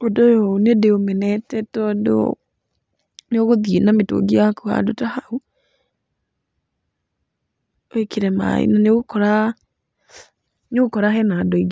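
Nothing goes wrong anywhere in this speech recording, so there's no fault to point to at any moment.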